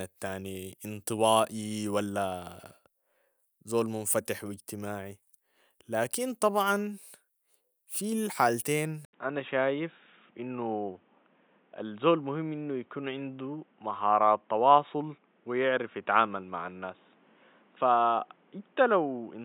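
At 9.05 s the recording system likely switched its input to a poorer device, such as a second microphone or a headset's call profile, and stays there to the end. A brief silence of about 80 ms marks the switch. From then on nothing above 3.8 kHz gets through, so the speech turns dull and boxy, losing its crisp consonants. The loudness stays roughly the same, but a faint new background noise sits well beneath the speech.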